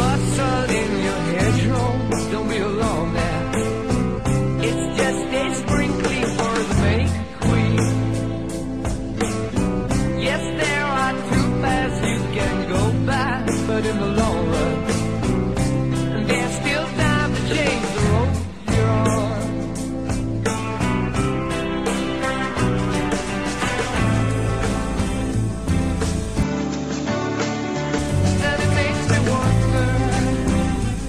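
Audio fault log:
26.43–27.98 s, input switched to a poorer device: for about a second and a half the top end disappears, with nothing above 7.6 kHz, so the sound goes duller and a bit boxy, then opens up again at 27.98 s. There's no gap at the changeover and the level stays roughly the same, but a new noise floor appears, sitting about 30 dB under the signal. The likely cause is the input hopping to a narrower-band microphone and back.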